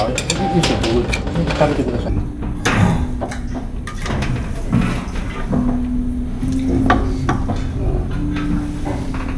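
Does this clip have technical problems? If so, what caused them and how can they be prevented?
Yes. From 2.09 s to the end, the sound has a wrong sample rate fault. It plays at half speed and drops by 12 semitones, a full octave, so everything turns slow, low and stretched. Speed and pitch shift together by the same factor, which points to material recorded at 44.1 kHz being played back at about 22 kHz with no resampling. Prevent this by matching the playback rate to the source rate or inserting a sample-rate converter.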